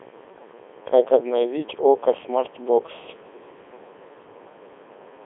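Robotic, buzzy speech throughout, with nothing above 3.8 kHz. The Codec 2 vocoder resynthesises the voice from sine waves, which fits its 3.2 kbit/s mode.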